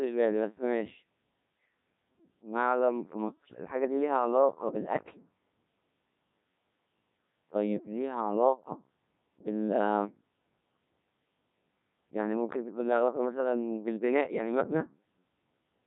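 From start to finish the speech runs through a Codec 2 vocoder, rebuilt from pitch and envelope alone, so it's robotic and buzzy, with heavy damage that fits a 1.3 kbit/s setting.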